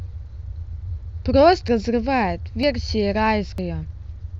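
Audio missing between chunks occurs at 0.73, 1.68, 2.63 and 3.58 s: the speech jumps forward abruptly at each point, with roughly 50 ms cut out and the two sides butted together without any gap. The skips recur every 0.95 s, which fits a recorder handling the signal in 1-second blocks and dropping a short slice at each block changeover, the likely cause, so each seam clips a fragment of the sound passing through it.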